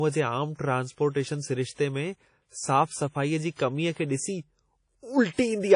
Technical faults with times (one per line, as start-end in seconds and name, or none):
0.00-5.75 WMA compression